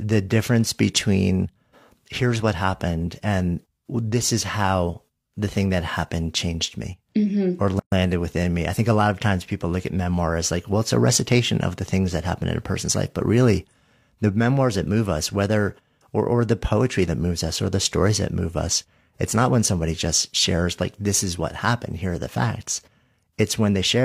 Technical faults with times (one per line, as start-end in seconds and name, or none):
7.80-7.92 gap at a join of encoded pieces